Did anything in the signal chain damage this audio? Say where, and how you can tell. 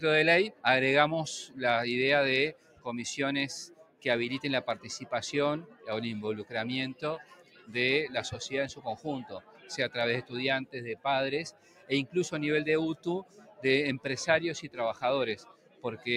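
Yes. The damage happens at the call-processing stage: a noise suppressor built for speech was applied to this non-speech sound. It mistakes steady tones and decaying tails for background noise, so the level pumps by around 15 dB throughout, with attacks surviving and sustained parts sinking.

The sound is cut by the noise suppressor at 0.5–1.61 s, 2.52–7.75 s, 8.74–13.65 s and 14.64–16.07 s, with the deepest drops of about 16, 17, 16 and 16 dB. Held material and decays dip or end early, adding up to a few seconds of gouged sound.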